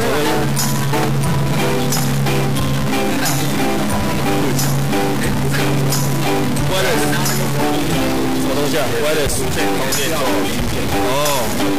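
From start to finish, the sound carries a harsh, buzzy distortion. It comes from a stuck bit. One data bit likely stays fixed, so about half the samples are off by a step of about -15 dBFS. Quiet passages fill with noise.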